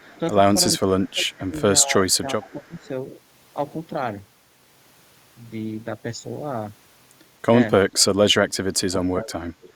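At 0.0 s the speech is suppressed in double talk: with both sides talking, the echo canceller likely could not separate the local talker from loudspeaker echo and turned everything down. The speech dips by roughly 10 dB until 0.13 s. Alongside it, to 0.18 s, an echo leak likely lets residual loudspeaker pickup through, returning a faint copy delayed 374 ms and about 35 dB below the speech.

The same suppression returns from 0.94 to 1.63 s, dropping the speech by up to about 20 dB, and from 1.83 to 2.9 s, at about 15 dB. The echo leak recurs from 2.47 to 2.88 s.

Later the speech is pulled down by about 25 dB from 8.88 to 9.33 s, then by about 20 dB from 9.54 s to the end. Within that final stretch, from 9.63 to 9.69 s, the echo leak returns at about 30 dB below the speech.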